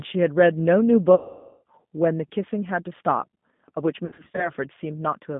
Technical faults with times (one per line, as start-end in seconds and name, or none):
0.00-5.39 G.729 codec
1.15-1.63 VoIP packet loss concealed by the speech codec
4.06-4.52 VoIP packet loss concealed by the speech codec